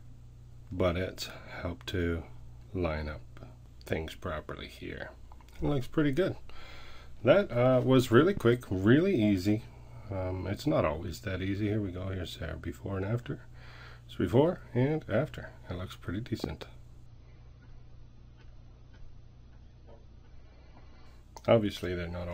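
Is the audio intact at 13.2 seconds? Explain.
Yes, the audio is intact at 13.2 seconds, with no dropout, click, distortion or other fault audible at that moment.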